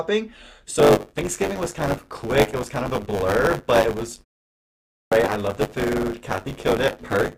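From 0.78 s to the end, the speech carries a steady robotic buzz at 100 Hz, a rattling texture that rides on the sound and disappears when it stops. This is buffer tearing. The writer and the reader of the output ring buffer have drifted until they cross inside every period, so a small slice of each one, roughly a sixth, replays audio from about 20 ms earlier, with hard seams at both edges. The 100 Hz rate fits a period of about 10 ms.

At 4.91 s, after a 0.75 s silence, speech snaps in abruptly with its onset missing, about 0.21 s swallowed. This is a clipped start after a pause. During the gap the output device dropped into a low-power state, and it needed that long to wake and lock again before it passed sound, so the opening of the next phrase was lost.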